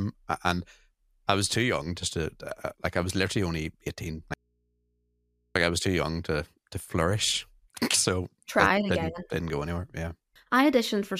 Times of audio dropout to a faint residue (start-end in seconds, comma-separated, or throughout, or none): 4.34-5.55